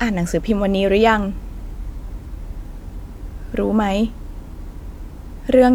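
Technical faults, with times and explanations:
No technical faults can be heard in the speech recording.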